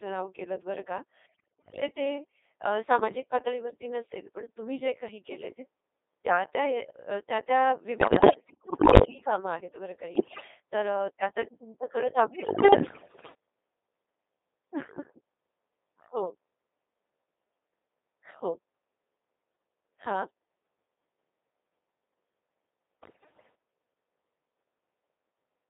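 Speech run through the Codec 2 vocoder at 2.4 kbit/s, squeezed into roughly 300 Hz to 3.7 kHz. Since the decoder rebuilds the voice from pitch, voicing and envelope data with sine waves rather than keeping the waveform, everything comes out heavily robotic and buzzy. On top of that you get bit errors on digital voice radio at 1.26–1.82 s, 7.98–9.04 s, 10.16–10.48 s, 12.28–13.34 s and 23.02–23.55 s. Flipped bits scramble each frame's pitch, level and spectrum, so the voice lurches into warbles and gibberish. The first burst is harshest, with an error rate near a fifth of bits, the middle ones around a tenth, and the last one a touch lighter.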